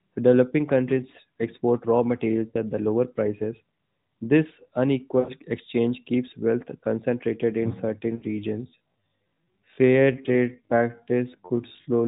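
A speech recording carried over the AMR narrowband mobile codec, with its spectrogram empty above 4 kHz. It has lost AMR speech frames at 2.48–2.56 s, 5.20–5.31 s and 8.16–8.25 s. The decoder repeats the last good frame and fades it, so each gap sounds like a short smeared dip. The waveform's envelope sags there, consistent with three or four 20 ms frames per gap. From 8.60 s to the end there is a time-stretched section. The pace suddenly drops to about 0.62 times normal while the pitch holds, which is likely software stretching. The speech drags, and the spectrogram's syllable patterns spread out in time without their harmonics moving.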